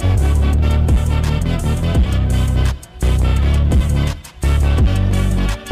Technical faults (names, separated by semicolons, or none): hard clipping